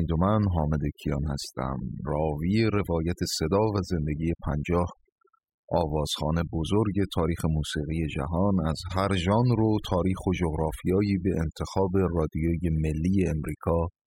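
From the start to the end of the clip, the speech carries the marks of overdone noise removal. The denoiser was pushed too hard, so any frequency band sitting close to its noise estimate gets pulled way down or switched off, and the softer parts of the voice get caught in that too. You hear it as a lowered background that breaks up into little twinkling specks.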